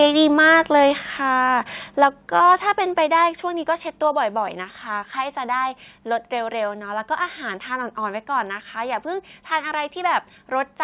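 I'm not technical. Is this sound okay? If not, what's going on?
No. The microphone's input was likely set too high, causing microphone overload: the loudest moments hit their ceiling and get chopped flat, giving a harsh, crackly edge from 0.01 to 0.82 s, 2.02 to 2.06 s, and 2.36 to 2.53 s.

The call software likely reacted with microphone volume stepped down, cutting the input level in sudden steps at 1.02, 2.04, 3.06 and 4.08 s, so the voice abruptly gets quieter each time.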